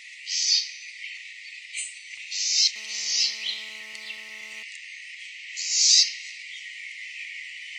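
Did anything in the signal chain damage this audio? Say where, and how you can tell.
Yes. From 2.76 to 4.63 s a GSM phone buzz sits about 25 dB below the sound: a steady, raspy drone at 217 Hz, drawn on a spectrogram as a comb of harmonic lines. A nearby phone on a call pulsed its transmitter, and the analogue wiring rectified those bursts.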